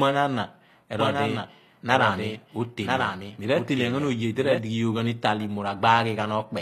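A speech clip whose treble sounds gritty and metallic throughout, with s sounds turning lispy and the top end bright but not quite real. That points to a low bitrate, likely HE-AAC compression, rebuilding the upper spectrum from copied lower bands whose harmonics don't match. From 0.99 s to 4.59 s a second full-band copy of the speech runs about a second behind, a few dB quieter, dry and cutting in and out abruptly. This is a doubled audio track, likely from a slower capture path or an edit holding two offset copies.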